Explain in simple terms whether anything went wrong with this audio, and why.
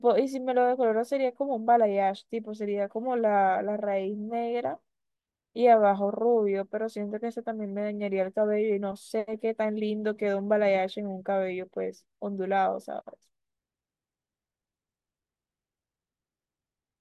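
Nothing went wrong with this audio, so there is no fault to explain.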